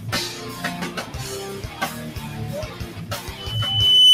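A speech-oriented noise suppressor is running over the whole recording, treating anything steady as noise. Sustained tones, ambience and decay tails are pulled down while transients pass, so the level swings by around 15 dB and the sound pumps and thins between attacks. Unlike a compressor's pumping, which follows overall loudness, this tracks steadiness: sharp onsets stay intact and only what lingers is gated away, often with a fluttery, watery edge. From 3.37 s to the end, a loudspeaker feedback squeal takes over. A single 3 kHz tone swells over roughly 0.7 s and settles a few dB above the programme. What separates it from an interfering whistle or stray test tone is that build-up: a fixed tone appears at full level, whereas here the microphone is re-amplifying its own loudspeaker until the loop gain at that frequency runs away.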